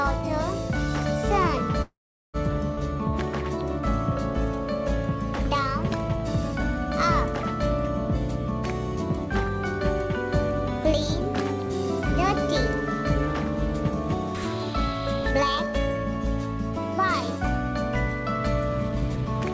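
Audio carried over a call path, with nothing above 8 kHz, which fits the G.722 codec at 64 kbps. A call audio freeze runs from 1.82 to 2.37 s. The last sound stretches into a fading buzz or hiss, then about 0.4 s of silence, likely from delayed packets emptying the jitter buffer. A skip ahead follows at 2.76 to 2.80 s. Roughly 150 ms of audio is dropped, and the two sides join almost directly. Jitter buffer speed-up occurs twice, at 14.73 to 16.15 s and at 18.90 to 19.53 s. Playback runs 4% and then 9% fast at unchanged pitch. Each stretch sheds roughly 70 ms as the buffer trims its backlog.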